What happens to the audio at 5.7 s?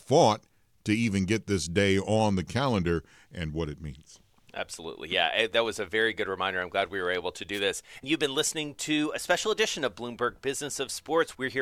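Nothing goes wrong at 5.7 s: the speech there plays through intact, with no dropout, click, distortion or other fault.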